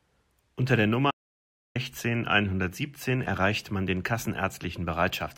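The input signal was likely lost for a moment, with the recorder writing silence, giving an audio dropout to silence from 1.11 to 1.75 s. The speech cuts off abruptly, about 0.64 s vanishes into silence without room tone, then resumes mid-flow.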